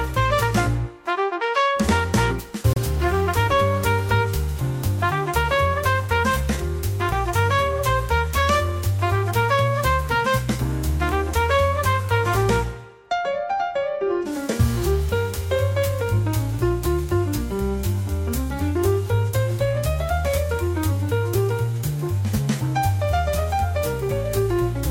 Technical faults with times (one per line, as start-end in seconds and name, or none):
2.73-2.78 damaged data in a compressed stream